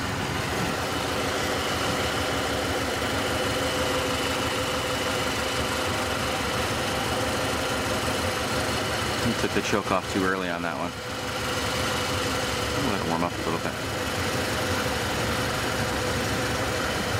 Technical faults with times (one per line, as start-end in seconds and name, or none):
none